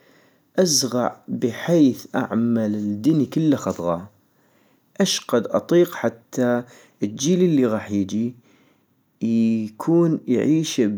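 At 2.23 s, between "ازغع بحيث" and "الدني كلا خضغا", a single sharp tick cuts across the speech, brief and broadband, with no relation to the surrounding sound. This is a bit error spike: one flipped bit in a single sample made its value jump by a power of two and then return at once, leaving an isolated impulse peaking at about -36 dBFS. Because it lasts only one sample, its energy spreads across the whole spectrum.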